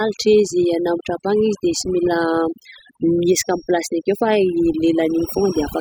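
A speech recording with overdone noise removal throughout: the noise reducer was set so hard that bands near its noise estimate are pulled down or gated off, taking quiet speech detail with them. The background falls to near silence sprinkled with twinkling specks. That residual twinkle, rather than steady hiss, separates it from plain broadband noise. From 3.04 s to the end, a thin, steady 5.6 kHz tone sits well below the speech, swelling and fading slowly in level. This is likely a feedback whistle, a speaker-to-microphone loop held right at the edge of feedback without running away. Its slow swelling and fading and its failure to build distinguish it from full runaway howl or a fixed electrical tone.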